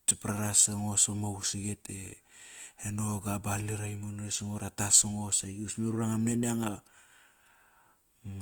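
Throughout the speech, the sound is grainy, rough and noisy, without swirling holes. This is likely Opus compression in its music mode, which fills starved bands with noise. The damage fits a low bitrate near 24 kbps. Content still reaches 20.2 kHz.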